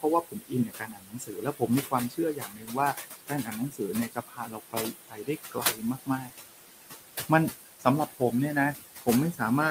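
Noise suppressor artifacts run through the whole clip. The room noise sits about 9 dB below the speech. The suppressor judges which frequency bands hold steady noise and lowers them, frame by frame, by about 16 dB. Because it works per frame, the background is not constant. It drops away in the gaps between words. It comes back up under the speech, where the suppressor lets more through. The noise floor moves with the talking instead of staying still.

The noise suppressor also cuts speech, in five spans. The first runs from 0.23 to 1.93 s, with about a second of it turned down, by up to about 18 dB. Next is 2.09 to 2.77 s, about half a second affected, up to about 17 dB. A short one follows at 2.94 to 3.07 s, about a tenth of a second, up to about 10 dB. Then 3.26 to 5.29 s, about a second affected, up to about 19 dB. The last is 5.52 to 6.32 s, under half a second affected, also up to about 19 dB. 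In each span the suppressor mistook parts of the speech for noise. Those parts were lowered along with the background. They sound swallowed or faint.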